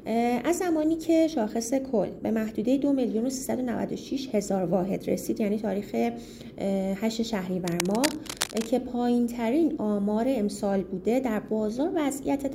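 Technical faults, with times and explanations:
7.65–8.67 s, cable scratch noise: for about a second there's a dense, ragged scratching riding over the sound, fairly loud, only a little below the signal itself. That's likely a worn cable or connector being moved, its contact resistance jumping about and spraying uneven noise bursts.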